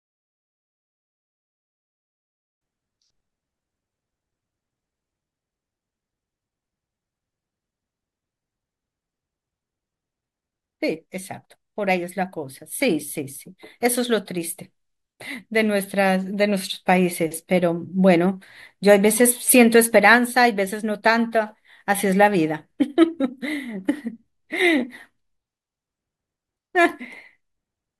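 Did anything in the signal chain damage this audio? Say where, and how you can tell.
Yes. A gain stage applied the fade-in at about 7-bit resolution without dither, so from 0.00 to 2.61 s the quiet start collapses into coarse square steps. The speech sounds gritty until the fade reaches full level: truncation distortion on a fade.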